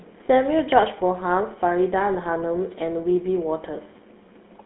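Throughout, the speech carries GSM full-rate codec damage: a gravelly, buzzy roughness from pulse-driven excitation, which plain band-limiting lacks. Nothing passes above 3.9 kHz in this 13 kbps stream.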